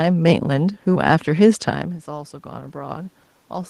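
From 1.65 s to 3.22 s the automatic gain control responds to a drop in input level, about 15 dB, which follows the talker moving back from the microphone at around one and a half seconds. The automatic gain rising that results is slow and partial, adding only about 3 dB over that stretch. The quieter speech and the room noise behind it swell together, creeping upward rather than snapping back to the earlier level.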